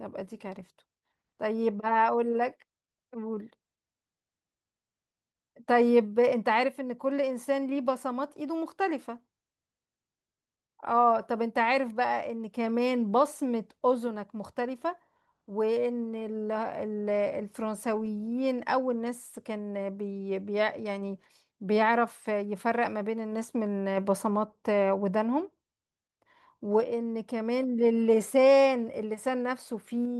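No technical faults are audible anywhere in the speech.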